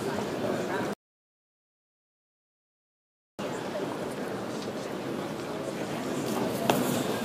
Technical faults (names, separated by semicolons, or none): audio dropout to silence